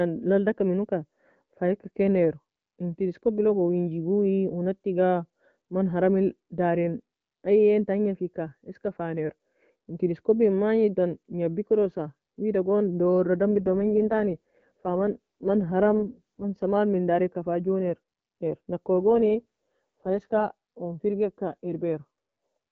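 From 13.52 to 16.65 s and again from 19.08 to 20.46 s the speech turns rough, raspy and synthetic with no gap. This is an AMR rate drop, the wideband codec falling from its clearer rate to what sounds like its lowest modes, around 6.6 kbit/s.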